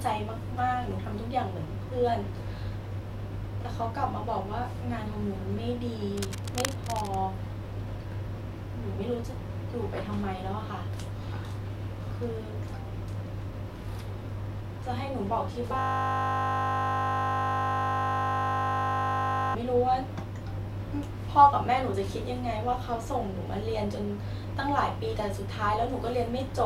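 A worn cable, connector or control was most likely moved between 6.17 and 7.21 s, its contact resistance jumping about erratically. The result is cable scratch noise: dense, uneven crackling and rustling laid over the speech, fairly loud and only somewhat below it.

From 15.79 to 19.55 s the system froze while the audio hardware kept replaying the same ring buffer, a system hang loop. A 20 ms slice repeats exactly, close to 190 times, so the speech gives way to a steady 50 Hz buzz.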